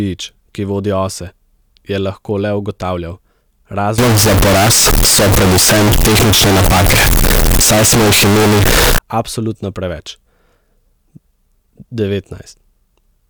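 Speech from 3.98 s to 8.98 s, ending just before "absolutno preveč", turns into a float read as integer fault, likely 32-bit float samples read as 32-bit integers. The waveform becomes near-square blocks at an almost fixed, high level, and the spectrogram fills with broadband energy as noise rises to speech level, though pitch remains traceable.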